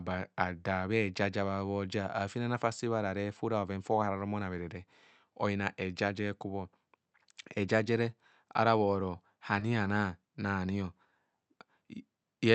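At 9.59 to 9.63 s there is a short concealed packet loss: about 20 ms of the call arrived too late to decode, and the receiver filled the gap by extending the preceding speech before blending back in. It is heard as a brief smear.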